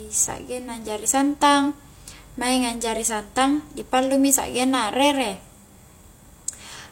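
From start to finish, the speech was most likely encoded first at a low bitrate and then saved again as a high-bitrate MP3, a case of low-bitrate audio saved at a high bitrate. The damage from the first pass, which fits a low-bitrate HE-AAC stage, carries straight through, because the second encoding cannot restore what was discarded. Nothing is present above 16.3 kHz, and the coarse artefacts of the earlier encoding remain audible despite the large file.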